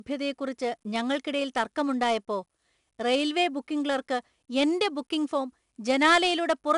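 From start to finish, the speech carries 4-bit ADPCM compression. Each sample is coded as a small step from a predicted value, with the step size adapting as it goes. The error this leaves is broadband noise that rises and falls with the level. It sounds like a gritty hiss on every loud syllable, with harsh edges on sharp attacks. Nothing reaches above about 10.7 kHz, which dulls the top. That fits a rate near 88 kbps at 22 kHz sampling.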